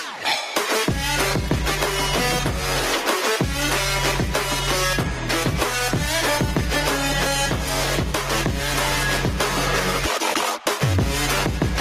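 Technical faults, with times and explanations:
Throughout, gain pumping: the level keeps swinging by about 10 dB. The likely cause is input gain set far too high, with a fast limiter or compressor clamping down on every peak and letting go in between. That constant push and pull squeezes loud and quiet parts closer together, so the whole clip sounds squashed.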